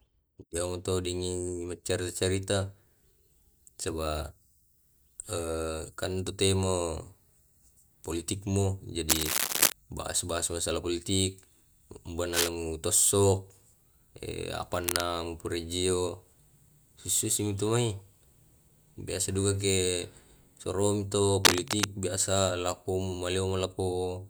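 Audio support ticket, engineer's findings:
Cable scratch noise on speech, four bursts: 9.09–9.72 s and 21.44–21.86 s, roughly 5 dB above the speech; 12.33–12.48 s and 14.84–15.01 s, about level with it. Dense, uneven scratching/rustling laid over the signal. Likely a worn cable, connector or control being moved, contact resistance fluctuating rapidly and injecting noise. Check cable and connectors.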